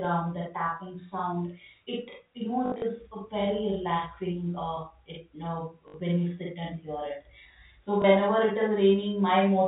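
From the start and all the way through, there's a channel delay doubling: one side of the speech runs about 46 ms behind the other, which fits a 2048-sample buffer, and once the two are folded to mono you hear a tight slap, like the speech talking over itself.

Then come three patches of packet loss with last packet repeated. From 2.66 to 2.82 s, 120 ms went missing in bits over 160 ms, the longest run 60 ms. Next, 5.88 to 5.94 s, then a single blip at 8.02 s. Each gap gets filled by replaying the previous chunk, so the longer runs buzz robotically at about 50 Hz, which points to 20 ms packets. The telephone band from the G.711 coding is still audible underneath.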